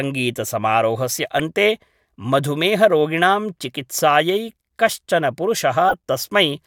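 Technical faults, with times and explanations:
1.39 s, corrupt frame decoded: flipped bits in the compressed stream reached the decoder, which played the damaged data instead of concealing it. The misread gains and codes put a brief spike of energy at the wrong frequencies, so it comes through as a short artifact peaking around -10 dBFS. Its very short span points to several tiny damaged frames in a row.
5.89 to 5.94 s, corrupt frame decoded: the same failure recurs over a few consecutive frames, lasting about 56 ms. The wrongly decoded values produce a louder artifact, peaking at about -5 dBFS.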